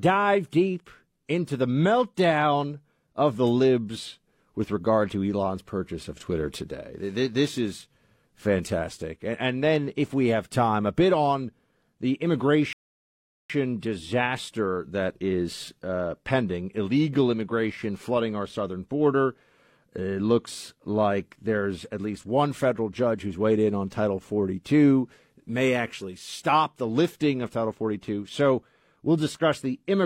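At 12.73 s the speech halts in a rebuffering stall: the player exhausted its downloaded audio and waited until 13.50 s, adding about 0.77 s of silence before resuming exactly where it stopped. The waveform shows a flat gap; the spectrogram, a clean blank column.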